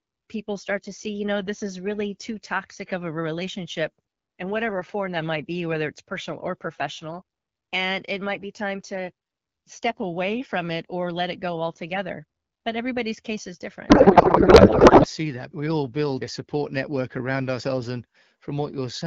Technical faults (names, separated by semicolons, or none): codec payload misread